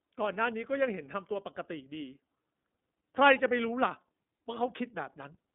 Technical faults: iLBC codec

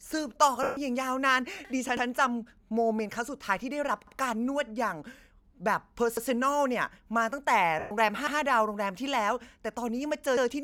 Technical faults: lost LE Audio frames; overlapping chunks

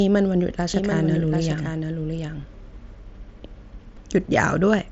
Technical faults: doubled audio track; concealed Bluetooth headset packet loss

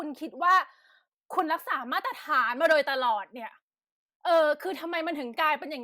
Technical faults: none

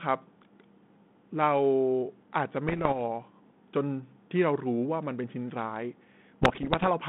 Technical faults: bit errors on an ADPCM link

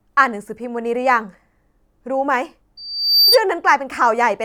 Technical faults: loudspeaker feedback squeal

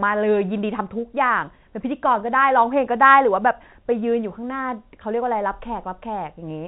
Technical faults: none

